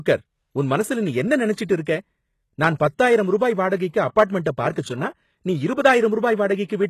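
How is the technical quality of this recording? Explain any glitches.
The speech is clearly compromised by low-bitrate coding, with one brief smearing glitch.

Throughout the clip, the treble sounds synthetic. Sibilants come out gritty and metallic, and nothing is present above about 12.3 kHz. The likely cause is HE-AAC compression at a very low rate, around 16 kbps judging by the damage. The codec transmits only the lower spectrum and regenerates the top by copying lower bands upward under a coarse envelope, so the upper harmonics no longer line up with the real ones. Unlike plain low-pass filtering, the top end stays bright but sounds false rather than simply dull.

From 4.72 to 4.76 s, just before "சொன்னா நீ", there is pre-echo: about 37 ms of hiss leads into the onset, and the attack itself sounds softened. The transform block containing that sharp onset spread its quantisation noise across the whole block, including the silence before the attack. 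What separates it from a click or dropout is that it is a short noise wash that precedes the transient, not a break or spike at it.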